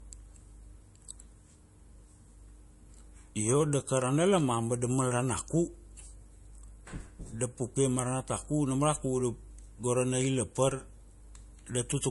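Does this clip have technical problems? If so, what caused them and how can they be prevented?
Yes. The speech has nothing above 11.3 kHz throughout, which points to low-bitrate audio saved at a high bitrate, likely a low-rate MP3 re-encoded much higher. Keep the original source and encode once at a high bitrate.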